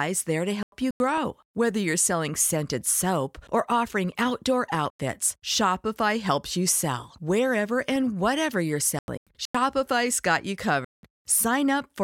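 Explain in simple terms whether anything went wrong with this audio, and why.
The speech drops into sudden silence four times: 0.63 to 1.18 s, 4.75 to 5.00 s, 8.99 to 9.55 s and 10.84 to 11.03 s. That is a corrupt frame muted: damaged chunks of audio were rejected and replaced with silence.

Short clicks at 5.96 s and 7.96 s, the second one louder, come from a corrupt FLAC frame, where damaged data was decoded into a brief burst of wrong sound.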